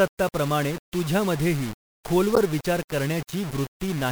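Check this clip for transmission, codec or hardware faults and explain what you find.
Two faults are audible in this speech clip. One runs the whole way through and one is a brief event.

Low bit depth without dither affects the entire clip. The speech sounds grainy, with a gritty distortion that moves with the voice. Quiet passages suffer most. Rounding to a likely 5-bit depth leaves error only about 15 dB below the signal.

A corrupt frame decoded appears from 2.35 to 2.38 s. It is a short, loud burst or chirp, peaking around -5 dBFS. Damaged compressed data was played as if valid, placing energy at wrong frequencies. Its length fits about two bad frames.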